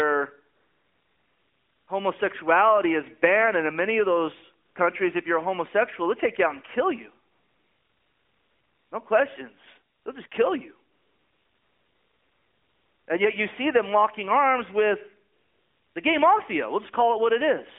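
A speech clip with AMR comfort noise in seven pauses. The background drops out and a smooth, steady synthetic hiss switches in at 0.56–1.88 s, 4.66–4.76 s, 7.32–8.92 s after "out and kill you", 9.94–10.06 s, and 10.28–10.32 s. It happens again at 10.92–13.08 s after "just kill you", and at 15.34–15.96 s between "them locking arms with" and "the gay mafia". The phone judged these gaps silent and stopped sending speech frames, so the receiver invented noise from a rough level and spectrum. All of this passes through a narrowband phone line that fits AMR-NB at 12.2 kbps.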